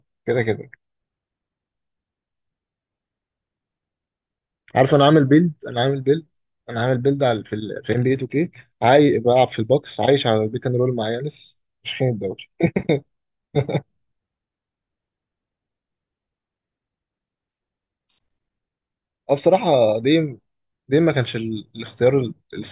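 No technical faults can be heard anywhere in this recording.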